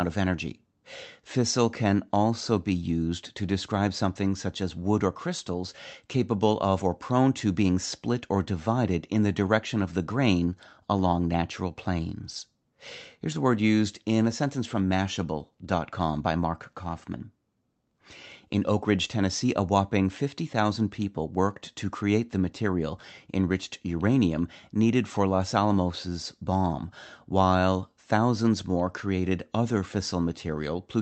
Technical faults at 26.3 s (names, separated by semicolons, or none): none